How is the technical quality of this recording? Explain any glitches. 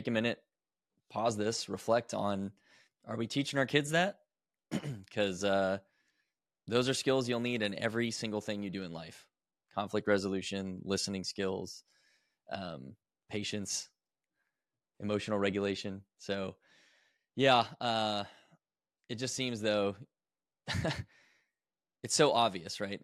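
Nothing stood out on listening to this recording; there are no glitches to explain.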